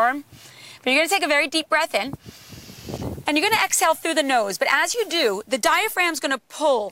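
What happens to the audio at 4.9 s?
At 4.94 s the sound drops into a block of digital silence about 5 ms long: a run of samples was replaced by silence, most plausibly because the output buffer wasn't filled in time. With no fade in or out, the waveform jumps to zero and back, so the two edges merge into a single tick. Unlike an isolated click or spike, nothing is added to the signal; it's a true hole too brief to hear as a gap.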